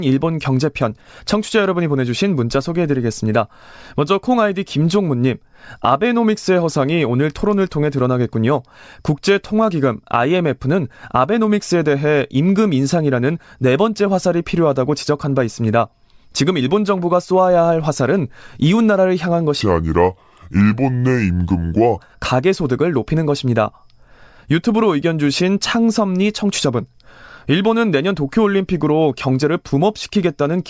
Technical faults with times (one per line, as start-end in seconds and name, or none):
19.61-21.98 wrong sample rate